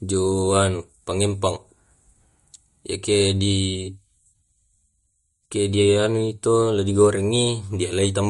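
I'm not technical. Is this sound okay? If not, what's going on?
No. The speech has a dull, watery quality from start to finish, with the top of the sound missing: nothing above 11.2 kHz comes through, so s sounds lose their crispness and can chirp or swirl. This is likely MP3 compression applied too heavily. To save space, the encoder discarded the highest frequencies and the quieter details it judged unimportant, and those details flicker in and out, producing the watery texture.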